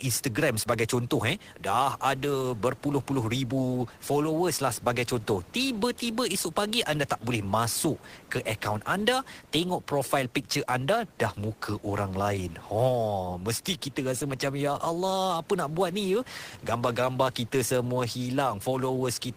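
No technical faults can be heard anywhere in this speech. The only background sound is the room noise picked up by the microphone, sitting about 27 dB below the speech.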